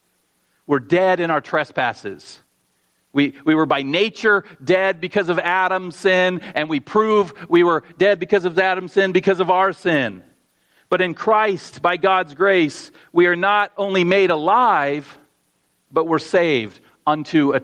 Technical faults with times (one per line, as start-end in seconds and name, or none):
0.00-17.63 gain pumping